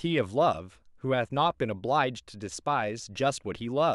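A short speech recording with no audible faults: no dropouts, clipping, glitches or level problems anywhere in it.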